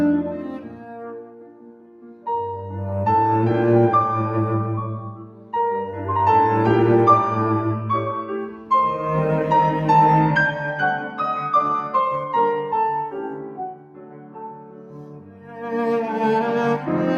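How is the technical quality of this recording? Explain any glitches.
The recording is compromised by processing rather than by clean damage: a noise suppressor meant for speech has been applied to music or sounds for the whole clip. It treats steady, sustained material and decaying tails as noise and pulls them down, so the level swings by around 10 dB as sounds start and then settle. Onsets come through largely intact while held portions sink, giving a pumping, thinning character. This differs from a compressor: the swing follows how steady a sound is, not how loud it is.

Sound cut by the noise suppressor is heard in five places: 0.47 to 2.26 s and 13.1 to 15.63 s, each with roughly two seconds of affected sound, and shorter ones at 5.08 to 5.53 s, 8.23 to 8.71 s and 10.99 to 11.19 s. Most dip by about 11 dB; the one near 11 s dips by about 7 dB. The suppressor judged these stretches to be noise and attenuated them beyond the general swing, so sustains fade early and decays are clipped short. 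Unlike a dropout, the sound never vanishes outright, and sudden parts survive.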